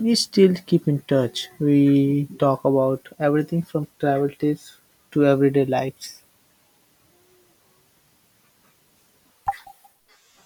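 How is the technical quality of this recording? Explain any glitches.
Nothing technical trips up this speech recording; there are no glitches to explain here.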